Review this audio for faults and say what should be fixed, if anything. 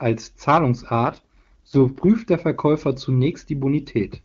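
An AMR rate drop hits between 1.04 and 2.08 s: the network appears to have pushed the AMR-WB codec down from its top mode to its lowest, consistent with a fall from about 23.85 to 6.6 kbit/s, trading speech detail for error protection on a weak link. The bandwidth holds and nothing drops out, but for that second the speech turns rough, raspy and synthetic, then clears once the rate recovers. Strengthening radio coverage or link margin, so the network has no reason to step the codec down, would prevent it.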